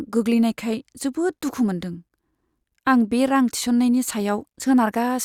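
No technical faults are audible.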